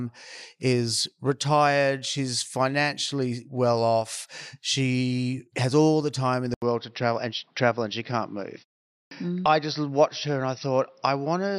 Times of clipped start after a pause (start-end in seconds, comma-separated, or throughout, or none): 8.92-9.11